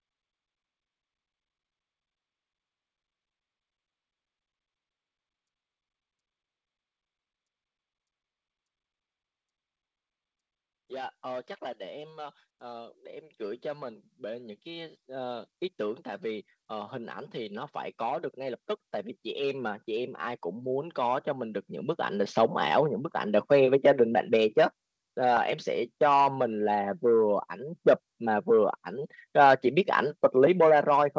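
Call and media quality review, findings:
Automatic gain rising, 10.88–18.67 s (about 11 dB) and 19.22–23.54 s (about 7 dB). AGC ramping up gain on a quiet input; voice and background noise swell together, unlike a talker moving closer, where the noise floor stays put. Band-limited to 8 kHz, fitting the G.722 call path.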